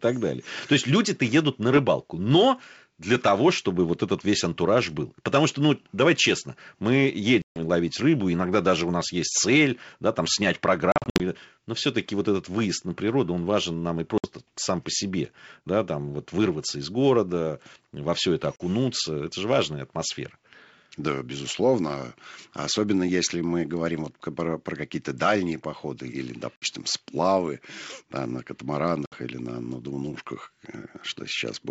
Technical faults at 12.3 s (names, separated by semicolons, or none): none